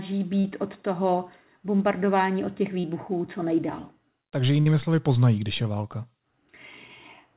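At 0.40 to 0.45 s and again at 2.80 to 2.85 s there is short concealed packet loss. The decoder bridged roughly 40 ms and then 34 ms by extending the preceding speech before blending back. Each is heard as a brief smear or wobble, with no held tone and no audible fade.

From 4.61 to 4.67 s a burst of packet loss leaves about 51 ms filled. The receiver prolongs the last sound while turning it down, so you hear a held buzz or hiss that fades rather than a quick blend. Speech then resumes slightly further along, with about 50 ms of the original missing. That fade and the jump forward set it apart from the two earlier events. Throughout, the WebRTC call path's narrowband coding, consistent with G.711 mu-law, leaves nothing above 4 kHz.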